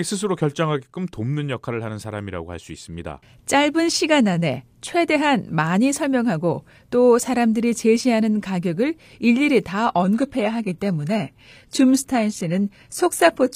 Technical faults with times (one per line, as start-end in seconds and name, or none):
9.87-13.56 adaptive stream at a lower bitrate